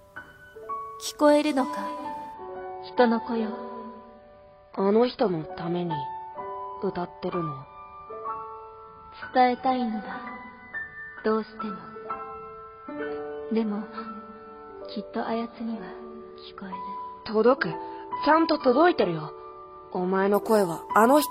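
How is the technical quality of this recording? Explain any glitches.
The recording is degraded for most of its length by one fault. Adaptive stream at a lower bitrate, 2.34 s to 20.34 s: the player switched without a gap to a leaner stream, which fits a drop from AAC at 96 kbit/s to 16 kbit/s. Nothing remains above 5.2 kHz, so the sound turns abruptly dull and artefact-laden.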